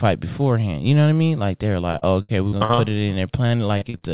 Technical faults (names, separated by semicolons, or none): repeated packet loss (robotic sound); jitter buffer slow-down